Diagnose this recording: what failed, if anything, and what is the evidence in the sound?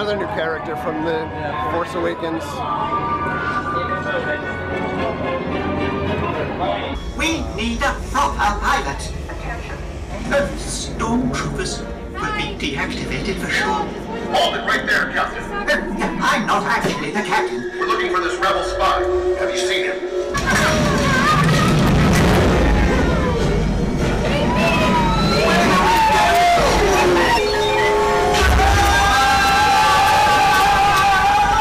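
Nothing failed; no fault is audible anywhere here.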